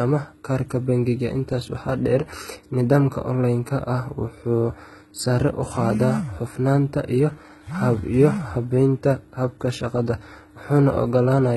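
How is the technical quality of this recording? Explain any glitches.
The recording is heavily compressed, and the damage runs through the whole clip.

From start to finish, the speech has the character of HE-AAC compression, which is the likely cause. Only the lower spectrum is truly coded. The treble is rebuilt by copying lower bands upward under a coarse envelope, consistent with a very low bitrate of around 16 kbps. The top end sounds bright but synthetic. S sounds come out gritty, lispy and metallic. Plain low-pass filtering would sound dull rather than bright, which tells the two apart.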